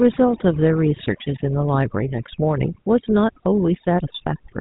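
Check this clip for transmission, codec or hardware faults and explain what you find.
Two faults run through the whole clip, both present from start to finish.

Overdone noise removal: the background drops and breaks up into small twinkling specks. An over-aggressive noise reduction stage is cutting individual frequency bands whenever they sit near its noise estimate, taking quieter parts of the speech away with the noise.

GSM full-rate codec: the speech has a plainly audible buzzy, gravelly roughness and nothing above 4 kHz. This fits a 13 kbps GSM full-rate link, which rebuilds the voice from a vocal-tract model driven by sparse, evenly spaced pulses, so fine detail in the excitation is lost.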